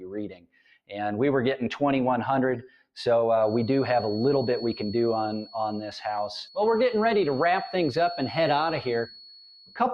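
A noise suppressor built for speech stays active throughout, treating held tones and decay as noise. The level therefore pumps by around 5 dB, with attacks passing while sustained parts and tails sink, so the sound flutters and thins.

Sound cut by the noise suppressor occurs from 0.28 to 0.93 s, with a deepest drop of about 21 dB over roughly half a second. It recurs from 2.61 to 2.96 s, about 19 dB deep. Held material there sags or has its decay clipped short.

From 3.35 s to the end, a thin, steady tone at 4.4 kHz sits around 20 dB below the sound, swelling and fading slowly in level. This is likely a feedback whistle, from a loudspeaker-to-microphone loop held just at the edge of feedback.

A shallower suppressor cut, about 7 dB, dips the sound again from 9.55 to 9.77 s.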